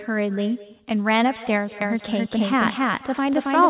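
From the start, the speech carries an echo with no canceller: the far end's loudspeaker feeds its microphone and returns the voice about a fifth of a second late, about 19 dB down. On a spectrogram, each syllable has a faint, smeared repeat trailing it.

From 1.82 s to the end, a doubled audio track appears. A second copy at roughly equal level lags by about a third of a second, likely from a slower duplicate capture path. It switches on abruptly and sounds like the same voice overlapping itself. The waveform shows stacked twin envelopes, and the spectrogram repeats each pattern sharply, with no decay, all below the 4 kHz ceiling.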